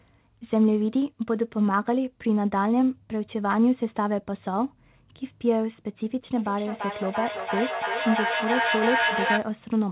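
From 6.36 to 9.55 s, feedback echo between two devices: one microphone re-captures another device's playback, so the speech repeats roughly every 300 ms, ringing and nearly as loud as the original.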